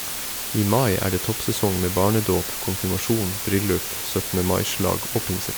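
Low bit depth with dither runs throughout the speech: with resolution of about 4 bits, added dither turns rounding error into a steady, even hiss nearly as loud as the voice.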